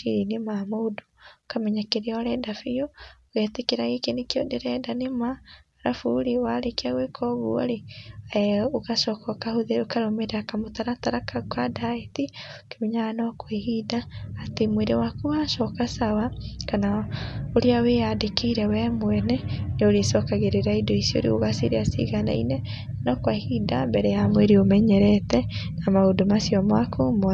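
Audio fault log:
Nothing stood out when listening to this speech recording.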